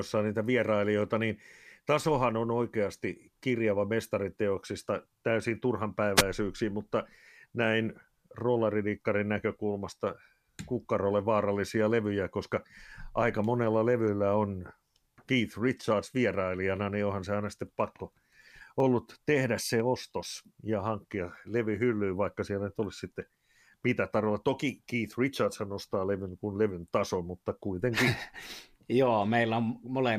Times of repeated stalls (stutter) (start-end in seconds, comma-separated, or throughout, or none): none